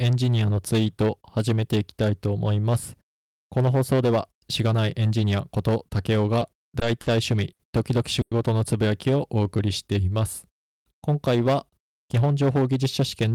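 Hard clipping runs through the whole of this speech recording: the signal is driven about 10 dB past what a stage in the chain can pass, so roughly 7 percent of samples have their peaks sliced flat, and those squared-off tops spray high harmonics that turn every loud syllable into a harsh fuzz. Repeated stalls (stutter) appear from 6.39 to 7.08 s, where the jitter buffer ran dry four times as packets came in late, and the receiver stretched the last sound to bridge 110 ms in total, the longest hold 50 ms, so the speech drags and catches without losing anything. A short stall from a late packet follows at 7.52 to 7.61 s: one packet missed its slot, the buffer emptied, and the receiver held the preceding sound for 70 ms before resuming from the same point. At 8.21 to 8.33 s comes a call audio freeze, where the sound is carried on as a fading buzz for 100 ms, dipping to near-silence for the last 10 ms before speech picks up where it stopped, likely because packets were held up in transit and the buffer ran empty. 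Jitter buffer slow-down spans 9.10 to 9.67 s, where the receiver rebuilt its reserve by repeating pitch periods and pause fragments, adding 68 ms so speech runs at 90 percent speed with unchanged pitch and drawn-out sounds. Jitter buffer speed-up covers 11.69 to 13.32 s, where the buffer held surplus audio and the receiver trimmed short pitch-period slices, about a tenth of a second in all, so speech runs at 107 percent speed and sounds hurried at the same pitch.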